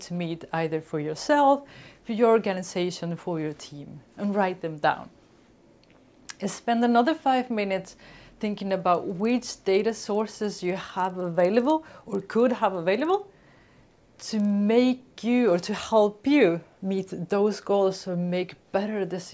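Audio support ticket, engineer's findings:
Steady 20 Hz tick/buzz under the sound, 8.7–14.5 s. Resampler restarted on every block: 48 kHz to 16 kHz, 50 ms blocks, edge errors each block.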